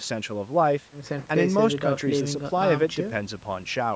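Listening through this speech recording, nothing stood out as a technical problem, and the thinned lowest bass is simply what call microphone processing normally does.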